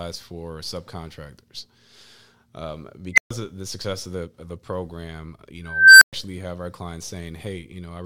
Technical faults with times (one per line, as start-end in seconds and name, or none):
3.13-3.30 unstable filter
5.64-6.13 unstable filter